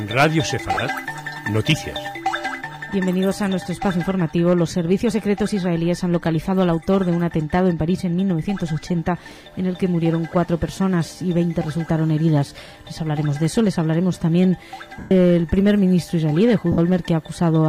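Hard clipping runs through the whole clip. Peaks are driven about 6 dB past what the chain can pass, so they are sliced flat. Only a small fraction of samples is affected. The flat tops add high harmonics, heard as brief crackle on loud moments.

Lost LE Audio frames cause gaps at 0.74 to 0.77 s (30 ms), 8.43 to 8.45 s (20 ms), 14.99 to 15.11 s (120 ms) and 16.72 to 16.78 s (60 ms). The lengths fit 10 ms frames. The decoder repeats the last spectrum with scrambled phase, so the sound turns into a noisy smear. During the 120 ms gap, it fades toward silence.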